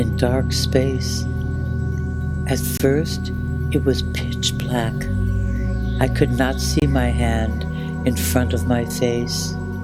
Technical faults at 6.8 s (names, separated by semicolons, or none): gap between chunks